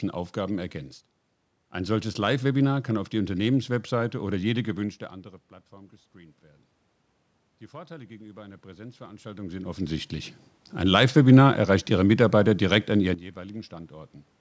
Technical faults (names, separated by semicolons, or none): automatic gain rising; sudden gain jump